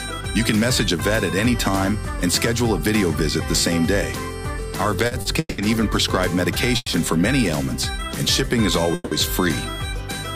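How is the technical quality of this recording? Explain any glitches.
The recording has three timing glitches from about its midpoint on, of two kinds.

Repeated stalls (stutter) run from 4.99 to 5.60 s. There are four separate gaps, the longest 190 ms. Together they fill 290 ms, about half that stretch. Packets kept arriving late, so the jitter buffer emptied again and again. Each time, the receiver stretched the last sound to cover the wait. Nothing is lost, but the audio drags and stumbles there.

A call audio freeze occurs at 6.76 to 6.88 s, and another at 8.94 to 9.13 s. The first holds for 100 ms. The second holds for 170 ms. Each time the sound hangs on a sustained, fading continuation of the last moment, then drops briefly to silence before resuming. The likely cause is packets held up in transit, so the buffer ran dry. Playback then picks up where it stopped. Each freeze adds its own length as extra delay, and none of the audio is missing.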